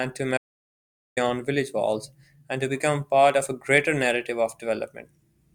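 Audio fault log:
0.37–1.17 s, audio dropout to silence: speech cuts to silence, no room tone, for about 0.79 s, likely a lost input, resuming mid-flow at "village walls and to".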